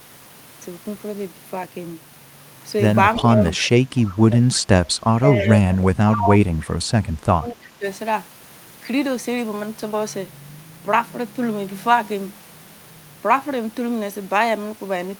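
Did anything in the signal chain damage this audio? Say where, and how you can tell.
Yes, both faults come from call processing. Speech suppressed in double talk appears at 3.19–3.44 s, 5.04–6.55 s and 7.33–7.86 s. Each time the speech dips while the far side is active, by about 10 dB in the first span, about 25 dB in the second and about 20 dB in the third. On a waveform the envelope is visibly pinched. On a spectrogram those stretches fade, with the upper bands thinning. This is likely an echo canceller that mistook local speech for echo and attenuated everything.

Echo leak shows as faint delayed copies of speech at 3.56–3.69 s, 3.97–4.15 s, 4.31–4.37 s and 6.60–6.66 s, each trailing the original by 325 ms. They sit about 15 dB below the speech in the louder scraps and about 25 dB below in the quieter ones. On a spectrogram they are short, ghostly repeats of earlier harmonic patterns, offset in time. 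The likely cause is a far-end loudspeaker echo that the canceller failed to remove fully and sent back.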